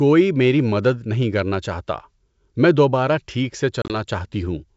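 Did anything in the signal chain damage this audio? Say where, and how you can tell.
Yes, packet loss on an ADPCM call, at the network stage, between 3.82 and 3.95 s. About 60 ms of speech vanish in hard-edged silent gaps scattered over roughly 80 ms, the longest lasting 30 ms, which suggests several lost packets. Unlike a buffer dropout, each gap is followed by speech returning slightly distorted, settling over tens of milliseconds as the decoder's predictor and step size resynchronise. The G.722 wideband coding itself stays clean.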